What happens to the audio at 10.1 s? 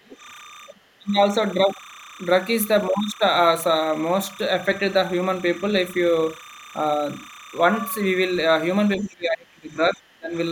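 At 10.1 s the speech sits inside a suppression span running from 8.97 to 10.36 s, likely speech suppressed in double talk. An echo canceller, unable to separate the talker from loudspeaker echo while both sides spoke, turned the talker down. The speech dips by as much as about 25 dB. On the waveform the envelope sags.

Timecode bleed is also present at that moment, as it is across the whole clip. Linear timecode running at 30 frames per second leaks in about 20 dB below the speech, switching between tones around 1 kHz and 2 kHz. It is heard as a steady chirping warble. On a spectrogram it appears as two persistent bands near 1 kHz and 2 kHz.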